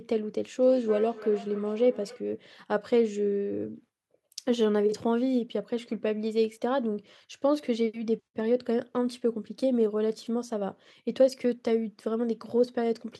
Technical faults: feedback echo between two devices

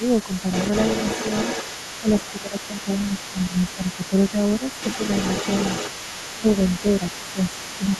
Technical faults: speech suppressed in double talk; other side's voice leaking through

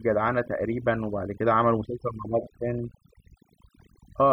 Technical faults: overdone noise removal

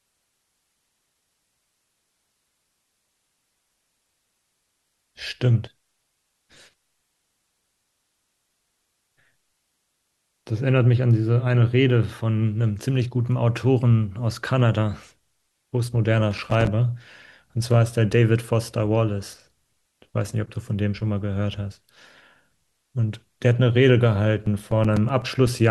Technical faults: loose connector crackle; periodic USB or driver dropouts

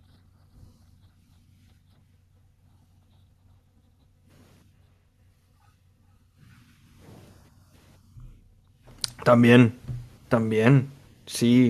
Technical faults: feedback echo between two devices

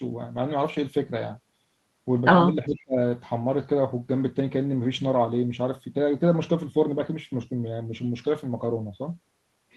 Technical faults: speech suppressed in double talk; echo leak

